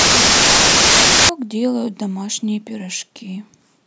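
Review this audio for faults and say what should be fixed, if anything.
From 0.00 to 1.29 s the speech is buried under loud, harsh noise and runs fast and high, a wrong sample width fault. The audio was stored as packed 24-bit integers but read back as 32-bit integers, so each decoded value straddles bytes from neighbouring samples and only fragments keep the true high-order bits. Consuming four bytes where three were meant plays the material 1.33 times too fast, raising its pitch by the same ratio. Carry the sample format explicitly in the file header or stream metadata and check it against the reader's configuration before decoding.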